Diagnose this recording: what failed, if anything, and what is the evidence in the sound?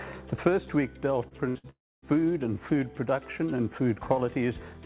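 The failure is in the network stage of a call path, where packets were lost and the receiver covered the gaps. Nothing in the audio reaches above 4 kHz, which fits the narrowband G.711 A-law coding of a 64 kbps call. This band limit belongs to the codec and is separate from the packet losses.

The first fault is a short concealed packet loss from 1.28 to 1.34 s. About 30 ms of audio never arrived, and the decoder extended the preceding sound across the hole before blending back into real audio. It is heard as a brief smear or wobble. It differs from a burst because the gap is only a few hundredths of a second and no fading buzz is audible.

Two bursts of packet loss follow back to back, from 1.49 to 1.58 s and from 1.58 to 1.67 s. Each covers about 60 ms of missing audio. In each gap the receiver repeated the last sound and let it decay, giving a held buzz or fading hiss, and then playback resumed further on. 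These bursts are longer than the 1.28 s event, but they never reach true silence.

From 1.70 to 2.05 s there is a long network dropout, likely caused by the stream stopping altogether. About 0.33 s is missing. After a short stretch of fading concealment, roughly a quarter of a second of near-silence follows before the audio returns. That silent stretch sets it apart from the bursts, where the synthetic fill lasts the whole gap.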